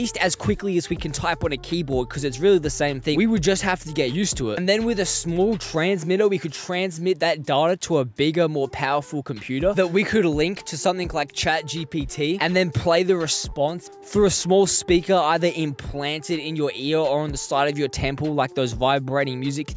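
No faults detected anywhere in the recording; nothing to flag.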